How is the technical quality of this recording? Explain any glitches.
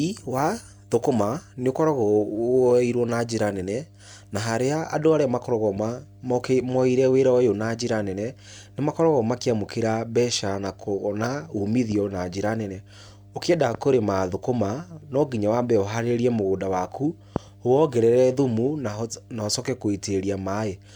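The recording carries mains hum from start to finish: a ground loop or nearby transformer is coupling the 50 Hz power line into the signal path. Beneath the speech this sits as a steady low drone with some low harmonics, roughly 25 dB below the speech level.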